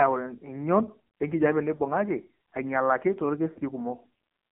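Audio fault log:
throughout: AMR narrowband mobile codec. The speech is confined to roughly 150 Hz to 3.6 kHz and sounds buzzy and synthetic. It is heavily damaged by a low-rate vocal tract model driven by sparse pulses, which fits the 5.9 kbps mode of AMR-NB.
1.76–1.81 s and 3.54–3.58 s: lost AMR speech frames. Each gap is a brief dip or warble, consistent with one 20 ms frame failing. The decoder repeats the previous pitch and vocal tract settings at reduced gain, then the voice resumes weak or rough for a moment.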